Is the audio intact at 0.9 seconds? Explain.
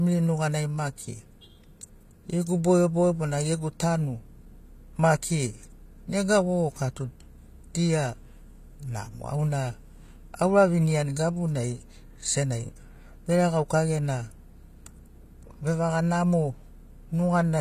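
No. At 0.9 seconds the speech carries the same plainly audible gritty, metallic treble heard across the whole clip, with s sounds turning lispy, likely from HE-AAC compression at a low bitrate, around 24 kbps. The codec keeps the lower spectrum and rebuilds the treble by copying lower bands upward, so harmonics misalign. A spectrogram would show a hard ceiling at 14.9 kHz and blocky, repeated texture above the crossover.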